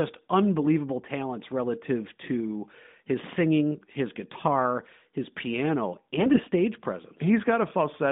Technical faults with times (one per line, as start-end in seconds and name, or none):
6.18-6.40 AMR bit errors